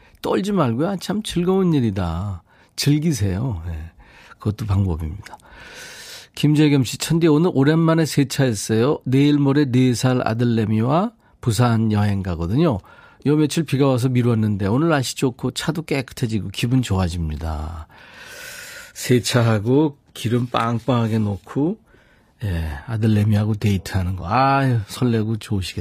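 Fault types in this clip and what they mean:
Adaptive stream at a lower bitrate: from 18.71 s to the end, the speech switches abruptly, with no gap, to a thinner, more artefact-laden version. This happens when a player fetches cheaper data over a slowed connection. Nothing remains above 14.9 kHz, consistent with a low-bitrate HE-AAC stream.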